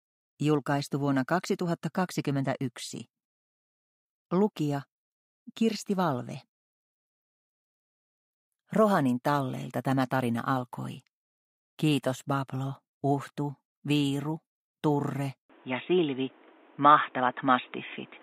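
From 15.50 s to the end, the audio abruptly loses its top end, with nothing above 3.8 kHz, and takes on a duller, boxier colour and a new background noise sitting roughly 30 dB below the signal. There is no gap at the transition and the overall level stays about the same. The most likely cause is an input switched to a poorer device, such as a headset in its call profile, whose narrower band and own noise replace the original pickup.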